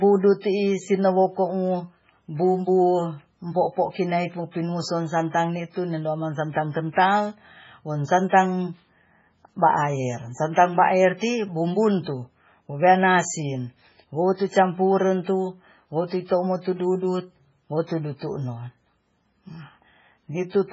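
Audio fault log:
throughout: MP3 compression. A very low-bitrate encode, likely MP3 at around 16 kbps, has removed everything above 7.6 kHz and dropped weak frequency lines frame by frame, so the speech sounds dull, watery and swirly, with metallic chirps on s sounds.
0.41–0.44 s and 8.29–8.32 s (after "amang santan kental wo"): pre-echo. A sharp attack falls late in a transform block, so quantisation noise sized for the loud onset spreads about 31 ms earlier. A brief hiss precedes each attack, which then sounds smeared.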